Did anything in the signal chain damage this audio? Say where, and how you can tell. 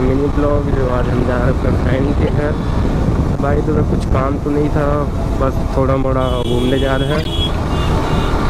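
Yes. Two loud bursts cut in, a brief one at 2.27–2.29 s and a longer one at 7.09–7.27 s, both peaking around -5 dBFS. This is a corrupt frame decoded at the codec stage: bit errors in a few consecutive frames were played anyway, misplacing energy in frequency.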